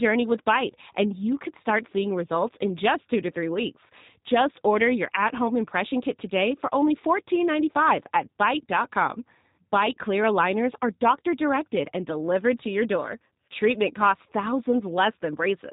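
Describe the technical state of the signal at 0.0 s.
At 0.0 s the speech already carries G.729 codec damage, which lasts the whole clip. The voice is rebuilt from a vocal tract filter, a pitch predictor and a few coded pulses per frame, so it sounds plainly rough and slightly synthetic, with nothing above 4 kHz. That pulse-built buzz sets it apart from a plain band limit, which dulls the top but leaves the voice natural, and it points to an 8 kbit/s coding rate.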